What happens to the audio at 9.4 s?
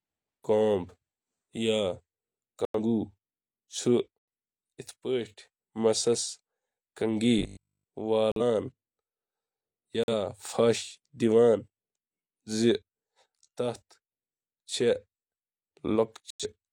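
Nothing goes wrong at 9.4 s; the speech carries on intact through that moment.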